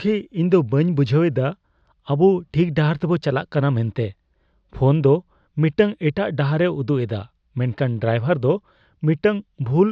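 No technical faults are audible anywhere in the speech recording.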